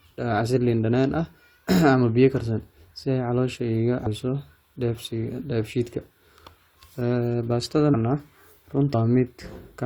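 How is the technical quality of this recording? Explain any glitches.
The recording has three audible dropouts where compressed frames were skipped. They occur at 4.05 to 4.07 s, at 7.93 s and at 8.93 s. Whole blocks of the coded stream were lost or rejected as damaged. The audio then jumps forward. It loses about 150 ms at the first point and about 200 ms at the other two. That fits several frames of 23.2 ms each. Overlapping frames smear each join into a short blip, not a sharp click.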